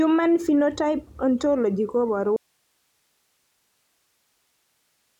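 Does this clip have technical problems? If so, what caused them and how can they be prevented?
Yes. At 2.36 s the speech cuts out abruptly in mid-flow and never returns. Only a bed of hiss, roughly 45 dB below the speech level, remains through to the end of the clip. This is an audio dropout to a faint residue, likely caused by the signal being lost upstream, such as at a failing connector or link, while the recording chain after the break kept running and captured its own noise floor. Securing connections and monitoring the input live during recording would catch and prevent this.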